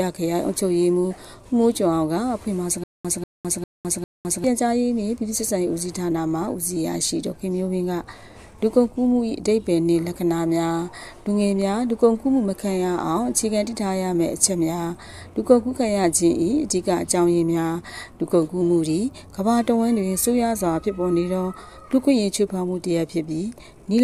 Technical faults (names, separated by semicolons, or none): stutter with silent gaps